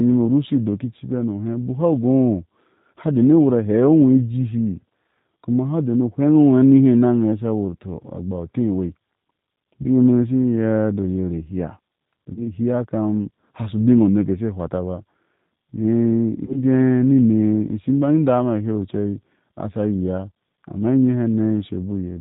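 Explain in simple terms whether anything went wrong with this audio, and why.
The speech sounds slightly rough, synthetic and muffled throughout: a G.729 codec rebuilt the voice from a simple model and dropped everything above 4 kHz. At 9.82 to 9.86 s, 12.34 to 12.43 s and 16.46 to 16.59 s, brief buzzy or noisy, fading smears appear. This is VoIP packet loss concealed by the speech codec: roughly 20 ms of audio went missing each time, and the decoder stretched the preceding sound to fill the gap.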